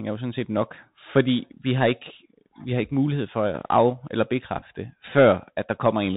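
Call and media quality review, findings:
Bluetooth CVSD headset codec, throughout the speech: hard band limit, nothing above 4 kHz; scratchy s sounds, granular hiss under the speech, loud high content distorting as the adaptive one-bit step falls behind. Fits a 64 kbit/s headset link.

Bluetooth headset packet repeated, 4.59–4.63 s: brief ticks scattered over about 30 ms, around 15 ms of audio lost. Headset chip re-decoding the previous packet's bits. Runs only a few milliseconds long, so no sustained 267 Hz buzz. Points to a handful of lost packets.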